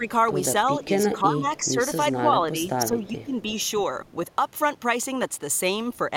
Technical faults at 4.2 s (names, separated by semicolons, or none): none